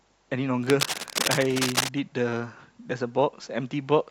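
From 0.63 s to 1.89 s, cable scratch noise runs over the speech as dense, irregular bursts of crackling and rustling, only a little quieter than the speech. The likely cause is a worn cable or connector being moved, its contact resistance fluctuating rapidly.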